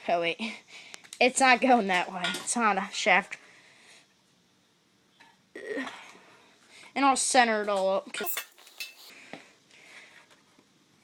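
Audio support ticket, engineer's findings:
Skip ahead, 3.33 to 3.35 s. Playback jumps forward with no fill and no audible gap; around 0.7 s of audio never plays. Jitter buffer or transport: a block was discarded, probably on overflow, while later audio was already queued, so the two sides are butted together and latency drops by about the same amount.

Jitter buffer speed-up, 5.07 to 5.70 s at 112% (about 70 ms removed), 6.43 to 8.13 s at 105% (about 100 ms removed), 10.24 to 10.66 s at 116% (about 70 ms removed). Audio runs hurried at unchanged pitch. Jitter buffer over target depth after bunched arrivals; receiver trims short pitch-period slices repeatedly to pull delay back down.

Section at the wrong speed, 8.24 to 9.10 s. Audio plays 1.85 times too fast, pitch raised by close to ten semitones, speed and pitch shifting together, high and rushed. Likely cause: this segment clocked against the wrong reference in the player or editing stage, not time-stretching, since pitch moves with tempo.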